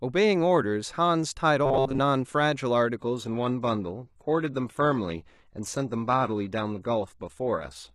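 From 1.66 to 1.99 s the speech turns into a rigid, metallic buzz pitched at 134 Hz, robotic sound from repeated short buffers. The cause is likely audio arriving too slowly, so the player loops the most recent fragment to fill the gap. A 134 Hz buzz points to a repeat period of about 7.5 ms, and most of this third of a second is recycled material. The real audio in between is lost, leaving only a rough outline of the speech.

At 2.99 s the quality drops abruptly and stays low to the end of the clip, the sound of an adaptive stream at a lower bitrate. There is no gap at the switch. From there codec artefacts are stronger. This fits the player stepping down from AAC-LC at around 96 kbit/s to HE-AAC at around 16 kbit/s, where the upper band is reconstructed rather than coded directly.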